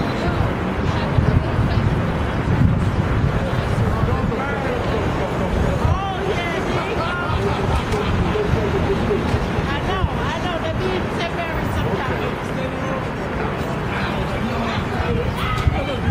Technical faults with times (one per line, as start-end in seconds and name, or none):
none